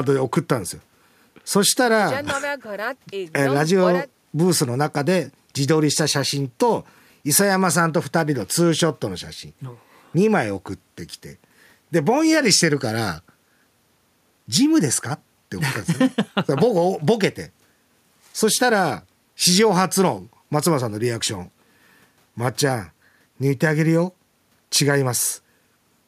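No dropouts, glitches, distortion or other transmission or processing faults can be heard anywhere in the recording.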